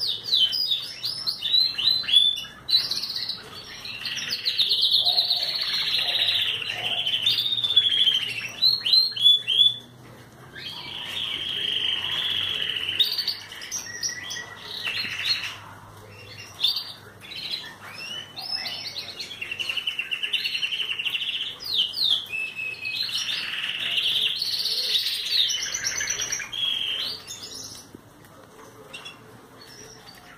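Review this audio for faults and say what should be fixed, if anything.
A regular click sounds every 1.15 s, from 1.18 s to 29.86 s, about thirty in all. These are likely clock drift buffer slips. Two unsynchronised clocks differing by roughly 700 ppm let the buffer drift until a few tens of samples are dropped or repeated. Lock both devices to one shared clock, or add asynchronous sample-rate conversion between them.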